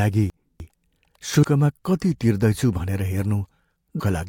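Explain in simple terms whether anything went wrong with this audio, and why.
Between 0.3 and 0.7 s, the chunks are out of order: one 100 ms piece plays three pieces late, causing a jumbled moment. Nothing is missing, only shuffled.

Damaged data in a compressed stream causes brief glitches at 1.41–1.44 s and 3.97–4.01 s. Unlike the shuffle, each comes from the decoder losing its place.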